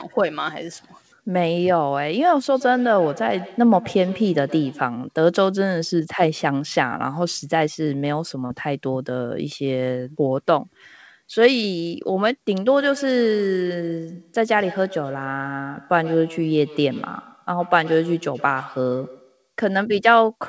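From 2.49 to 4.99 s there is feedback echo between two devices. A second device in the same room plays back the call, and the first microphone picks it up again. Its echo canceller only removes its own playback, so the sound returns roughly every tenth of a second as a thin, ringing repeat trailing the original, peaking about 17 dB below the speech. The same loop returns from 12.68 to 19.52 s, with repeats up to about 18 dB down.

Between 8.46 and 8.52 s there is short concealed packet loss. About 40 ms of audio never reached the decoder in time, so the receiver filled the gap by extending the preceding sound before blending back into the real signal. This produces a brief smear or wobble, heard against a band-limited call sound with nothing above 8 kHz.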